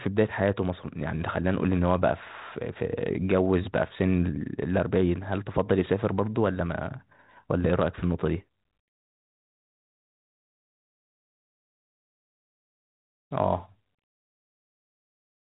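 Nothing goes wrong in this speech, which comes through a G.726 ADPCM link at 32 kbit/s, the DECT cordless rate, so it stays narrowband below 4 kHz with only the faint coding texture you'd expect at that setting.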